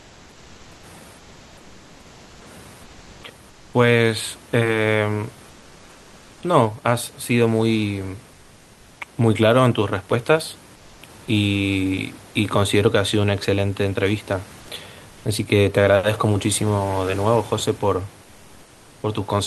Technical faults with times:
0.00-0.83 comfort noise in place of the background
1.17-2.45 comfort noise in place of the background
2.83-3.23 comfort noise in place of the background
3.49-3.73 comfort noise in place of the background
5.49-6.41 comfort noise in place of the background
10.75-11.01 comfort noise in place of the background
14.59-14.67 comfort noise in place of the background

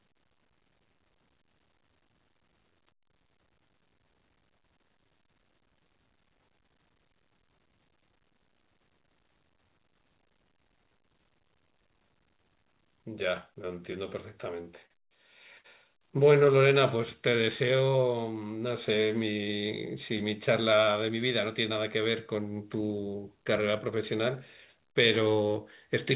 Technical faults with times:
13.62-14.92 repeated stalls (stutter)
15.58-15.66 short stall from a late packet
16.55-17.91 jitter buffer slow-down
20.14-22.35 jitter buffer speed-up

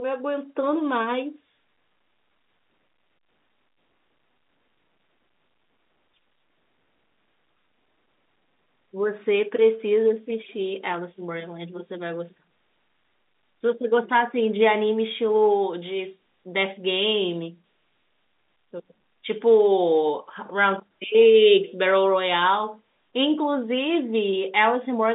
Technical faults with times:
none

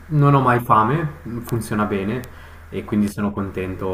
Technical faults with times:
1.49 bit error spike
2.24 bit error spike
3.08 bit error spike

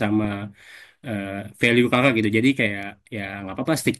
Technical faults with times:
1.64-2.08 hard clipping

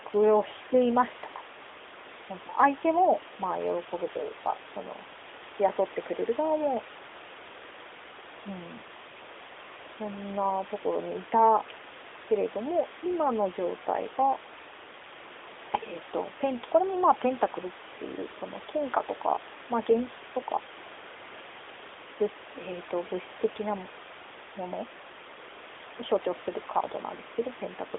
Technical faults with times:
none

